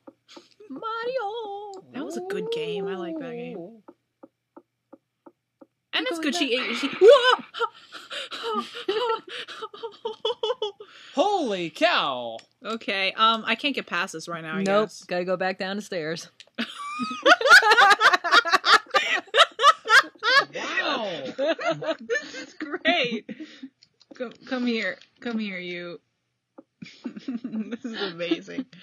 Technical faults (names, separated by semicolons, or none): adaptive stream at a lower bitrate